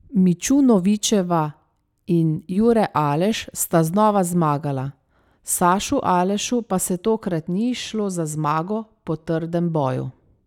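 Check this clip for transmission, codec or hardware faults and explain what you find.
No transmission, codec or hardware faults are audible anywhere in this speech recording.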